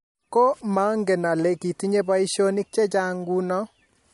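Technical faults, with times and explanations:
Throughout: MP3 compression. Plainly audible codec damage and nothing above 11.2 kHz point to a likely MP3 encode at about 48 kbps, where bit starvation zeroes weak frequency lines that flicker between frames, giving a watery, swirly texture under a fixed treble cut-off.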